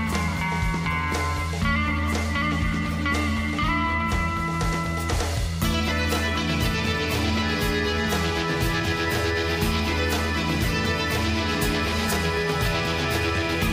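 A thin feedback whistle at about 5 kHz creeps in at 8.80 s and hangs on to the end at 13.72 s, sitting roughly 25 dB under the sound and swelling and fading slowly in level. It's likely a speaker-to-mic loop ringing right at the edge of feedback.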